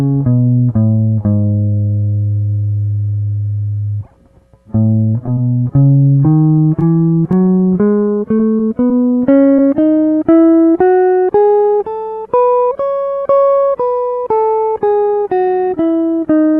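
From 5.24 to 7.34 s the music has scattered short gaps: about ten lost or late packets, none longer than roughly 15 ms, each patched by extending the preceding sound. They come through as brief ticks and hiccups. A spectrogram shows thin vertical smears, and the waveform shows brief repeated-looking slivers.

Short concealed packet loss follows at 8.38–8.40 s, 8.58 s, 8.89 s and 9.57–9.59 s. Each time about 10 ms never arrived and was filled by continuing the prior sound before blending back, which produces a small smear or wobble. Each shows as a narrow blurred column on the spectrogram. Across all of it, the call codec's content stops near 12 kHz, consistent with a 32 kbps Opus stream.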